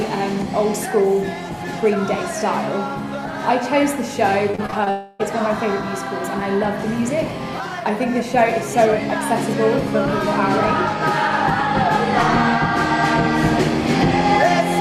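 Repeated packet loss (robotic sound) chops the audio from 4.51 to 4.88 s. Brief holes of up to 26 ms are patched with repeated sound, showing as stuttering, smeared vertical bands on a spectrogram. From 4.90 to 5.21 s a buzzy, fading continuation replaces the sound without reaching silence, likely a long network dropout that lost about 0.3 s of audio.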